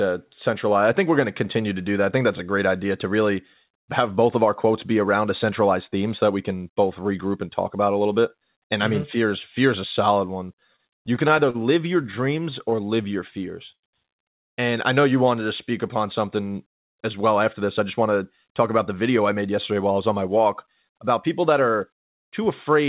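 Between 10.56 and 11.56 s, and again from 12.02 to 12.74 s just after "live your", there are repeated stalls, a stutter. Packets kept turning up late, the jitter buffer kept running dry, and the receiver stretched the last sound over seven short gaps each time. The longest gap is about 42 ms in the first run and 17 ms in the second, so the speech catches and drags without losing anything.

Right after that, from 12.76 to 13.40 s, and later from 14.94 to 15.43 s leading into "to speak upon something", there's a jitter buffer slow-down. The buffer was building up a reserve by repeating single pitch periods, adding about 49 ms and 55 ms in all. Playback drops to 94% and then 91% speed at the same pitch, so those stretches sound a bit drawn out.

At 13.72 s there's a call audio freeze of about 0.11 s. The last sound hangs briefly and then goes silent for about 100 ms before the speech picks up where it stopped, with nothing missing. 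That's likely packets held up in transit long enough to empty the buffer.

From 17.60 to 20.84 s, between "something as well after" and "about people that are", there's a jitter buffer speed-up. The buffer held more audio than its target and trimmed roughly 0.3 s out in tiny pitch-period slices. The speech runs at about 107% speed, a little hurried, with the pitch unchanged. Throughout the clip nothing comes through above 4 kHz, which fits narrowband G.711 on the call path.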